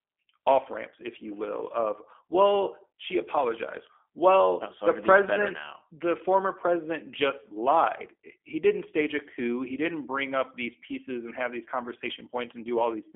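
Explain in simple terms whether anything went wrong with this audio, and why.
G.729 codec damage runs through the whole clip, from start to finish. This phone codec squeezes speech into a tiny stream, rebuilding it from a rough model of the voice, so everything above about 3.4 kHz is gone and speech sounds rough and synthetic.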